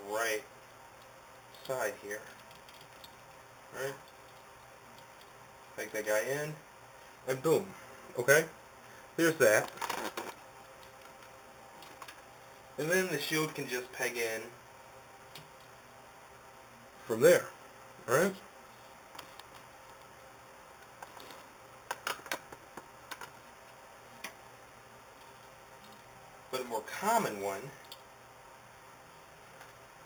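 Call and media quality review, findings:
Imaging from sample-and-hold upsampling, whole clip. Metallic fizz at about -13 dB, lowest copy in the 4–8 kHz band, points to an 8 kHz source held up to 48 kHz without smoothing. Unlike hiss, the fizz tracks signal level and drops out in pauses.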